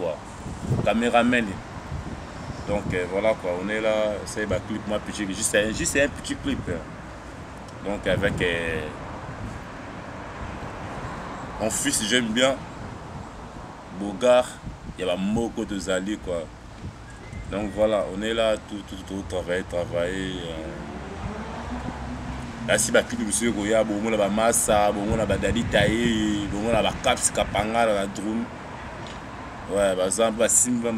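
No technical faults occur anywhere in the recording.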